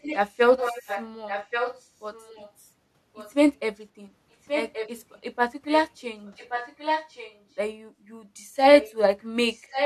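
An echo leak runs through the speech in seven stretches: 0.02 to 2.52 s, 3.14 to 3.32 s, 4.47 to 5.19 s, 5.68 to 5.73 s, 6.26 to 7.39 s, 8.81 to 8.95 s, and 9.53 to 9.86 s. A second copy of the voice trails the original by about 1.13 s. It is fairly quiet in the long stretches, barely there in the short scraps, and loudest at the very end. The likely cause is a far-end loudspeaker whose echo canceller let its own pickup return.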